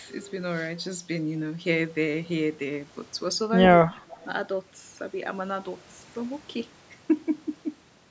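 A faint, delayed copy of the speech trails it from 3.96 to 4.26 s, about 0.28 s late: an echo leak, likely from a loudspeaker echo canceller letting sound through.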